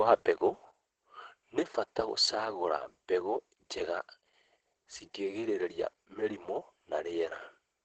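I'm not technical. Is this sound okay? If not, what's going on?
No. From start to finish the speech sounds muffled and a little hoarse, with a faint robotic edge, as if heard through a cheap phone line. Nothing in the sound reaches above about 8.8 kHz, so the crisp, airy detail is missing. This is heavy Opus voice compression: the speech was squeezed hard into its low-rate speech mode, which drops the highest sounds and rebuilds the rest only roughly.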